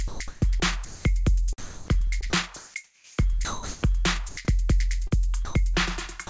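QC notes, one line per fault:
0.08–1.05 s and 1.58–3.83 s, sound chopped by the voice detector: The audio turns choppy, with stretches of the sound repeatedly swapped for a flat, hissy background. About 0.47 s is lost in the first span and about 1.23 s in the second. The likely cause is the sender's voice detector switching on and off, sending comfort noise instead of quieter parts of the sound. The substitute noise sits within the roughly 8 kHz band of the G.722 call path.
4.29–4.37 s and 5.45–5.55 s, sound dropped by the voice detector: The sound briefly falls away into steady, featureless noise for 80 ms and then 100 ms before returning. The likely cause is that the voice detector judged a soft portion of the audio to be background, stopped transmitting, and let the receiver fill the hole with generated comfort noise until it triggered again.
5.07–5.13 s, short concealed packet loss: A quick smear or wobble lasting about 40 ms, where the sound seems to stretch and blur instead of continuing cleanly. 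That slice of audio never reached the decoder in time. The receiver filled the hole by extending what it had just played and then blended back into the real signal, which is why the gap comes across as a blur rather than silence.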